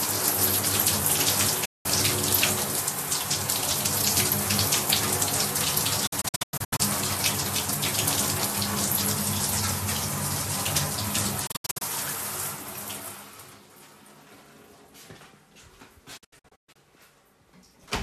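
Digital broadcast dropouts hit this recording of sounds at 1.65 to 1.86 s, 6.07 to 6.80 s, 11.47 to 11.82 s and 16.17 to 16.76 s. The receiver lost good frames and muted, fading out within about 8 ms. The first is a single 192 ms gap. The later three break into several short holes, the longest being 96, 72 and 120 ms. The missing stretches are multiples of 24 ms, which fits 24 ms frames, and the sound sent meanwhile is gone.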